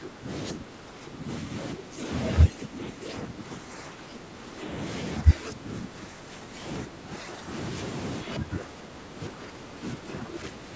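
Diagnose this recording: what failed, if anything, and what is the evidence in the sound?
Call processing failed. The speech dips by about 10 dB at 0–0.28 s, 0.53–1.53 s, 1.74–2.03 s, 2.47–4.62 s, 5.21–6.66 s, 6.84–7.52 s and from 8.24 s to the end. This is likely speech suppressed in double talk: the echo canceller confused the talker with far-end echo and attenuated both.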